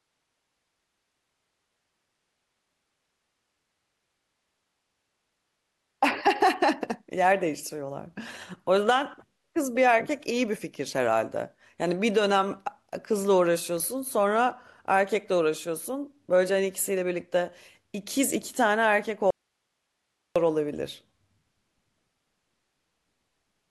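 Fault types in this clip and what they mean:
Audio dropout to a faint residue: the speech cuts out abruptly for about 1.05 s from 19.30 s, leaving only very faint hiss, likely a signal loss upstream with the downstream path still live.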